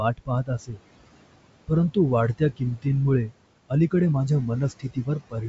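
Right from the start the background behaves unnaturally. The steady room noise drops away in the gaps between phrases and swells back underneath the speech. These are noise suppressor artifacts. The suppressor judges which frequency bands hold steady noise and pulls them down frame by frame, here by about 21 dB. The room noise itself, about 17 dB below the speech, simply comes and goes with the gating.

Between 0.17 and 0.8 s the opening speech sounds faint and partly swallowed, with soft sounds dipping by up to about 17 dB across roughly a third of a second in total. The same happens from 4.79 to 5.09 s, just after "वाढत्या किंमतींमुळे अलीकडे माझ्या", with a drop of about 18 dB over roughly 200 ms. This is speech cut by the noise suppressor: quiet speech was mistaken for noise and turned down along with it. The band above 7.7 kHz is empty throughout, which fits full-rate G.722 wideband coding.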